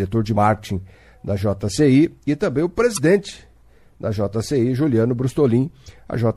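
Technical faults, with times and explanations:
Throughout, MP3 compression: weak detail flickers in and out from frame to frame, giving a watery, swirly quality with smeared attacks. The damage is plainly audible, which fits a low bitrate around 64 kbps, and that's the likely cause.
0.33 s, 2.95 s and 5.84 s, damaged data in a compressed stream: three short blips, each about 40 ms long. Bad bytes at those points throw the decoder off, so it mangles a frame and resyncs, and you hear a brief glitch.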